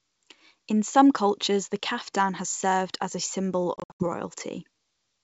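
After "served as a symbol", 3.77 to 4.03 s: ADPCM packet loss, 180 ms of silent holes (longest 80 ms), then a mismatched decoder briefly disturbs the returning speech.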